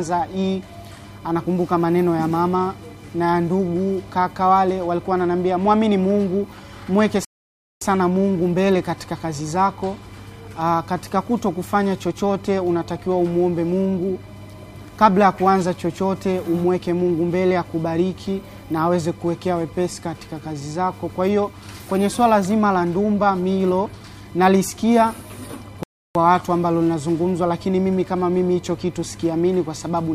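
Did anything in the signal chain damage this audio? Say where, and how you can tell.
Yes. Two rebuffering stalls sit at the playback stage, where the player drains its downloaded audio. At 7.25 s the sound drops to silence until 7.82 s, adding about 0.57 s; at 25.83 s it stops again until 26.15 s, adding about 0.32 s. Each time it resumes exactly where it left off, with nothing skipped. The player ran out of buffered data and paused until more arrived, so time is inserted while no content is lost.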